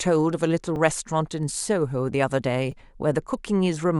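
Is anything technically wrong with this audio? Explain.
Yes. Repeated buffers occur at 0.76 s and 2.72 s in this speech. The next block of audio arrived late, so the player replayed its last one, a piece of about 5 ms, once and then twice, leaving hard joins heard as brief clicks or buzzes.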